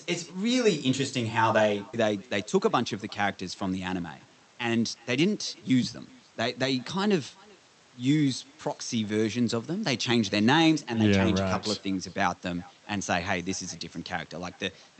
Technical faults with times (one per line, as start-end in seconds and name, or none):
0.00-14.99 echo with no canceller
1.93-1.95 skip ahead
2.15-3.16 jitter buffer speed-up
3.96-5.55 jitter buffer speed-up